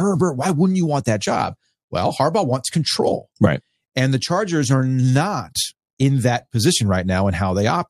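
No technical faults can be heard in this speech, so there is nothing to describe in time order.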